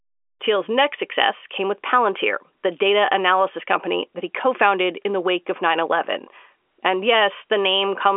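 Nothing stood out on listening to this speech, which carries the narrow, telephone-band character of G.711 coding with nothing heard above about 3.6 kHz.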